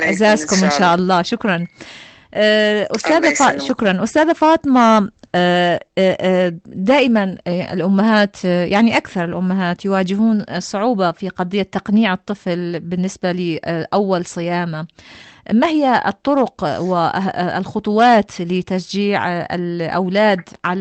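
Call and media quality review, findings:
No findings: the call path's Opus coding and its top end, capped near 8 kHz and consistent with a 32 kbps setting, are audible, with nothing to report against call and media quality.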